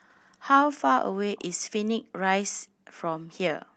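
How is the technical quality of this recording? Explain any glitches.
One glitch is audible in this speech clip. It is carried over a band-limited call path with nothing above 8 kHz.

Echo leak, 1.36 to 1.44 s: a very faint, delayed copy of the speech, about 390 ms behind the original, surfaces briefly. It is likely a loudspeaker-side echo canceller letting residual microphone pickup through and sending it back down the call.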